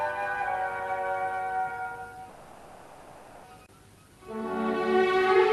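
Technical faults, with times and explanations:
2.29 to 3.46 s, call audio freeze: the sound stalls for about 1.1 s, its last moment drawn out into a buzzy, hissing continuation that fades without dropping to silence, then the audio carries on exactly where it left off. The likely cause is packets held up in transit, so the jitter buffer ran dry and the receiver filled the wait itself. Nothing is lost; the rest of the clip simply arrives that much later, still limited to about 12 kHz by the call codec.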